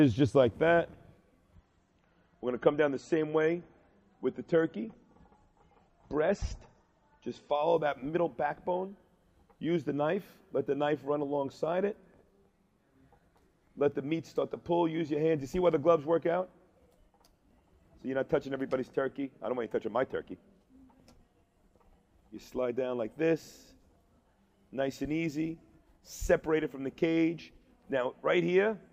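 From 1.55 s to 7.55 s the adaptive stream drops to a lower bitrate. The treble vanishes above 8.3 kHz, with swirly codec artefacts, pointing to a switch from about 128 to 32 kbit/s MP3. A spectrogram shows a sudden flat ceiling, with no gap in the waveform.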